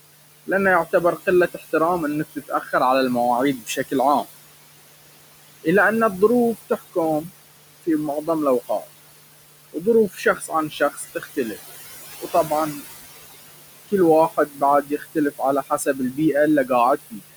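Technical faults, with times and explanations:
Throughout, noise suppressor artifacts: the room noise, sitting about 13 dB below the speech, sinks away in the pauses and swells back under each phrase. The suppressor is lowering bands it judges to be steady noise by about 19 dB, frame by frame.
0.47–1.63, 2.36–2.73, 3.58–4.25, 5.63–8.86, 9.73–11.57, 12.2–12.82 and 13.88–17.36 s, speech cut by the noise suppressor: soft consonants and word endings turn faint or swallowed, briefly in most spans and up to about a second in the last. The suppressor mistook them for noise, lowering them by about 14 to 21 dB.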